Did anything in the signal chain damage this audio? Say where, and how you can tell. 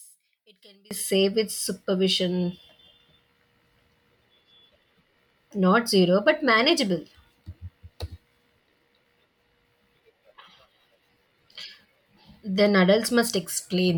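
Yes. From 0 to 0.91 s, right up to "safe with supervision", the centred speech nearly vanishes, dropping about 30 dB, leaving a faint residue. That's one channel inverted, likely a polarity swap in the analogue wiring, so the shared content cancels on the mono sum.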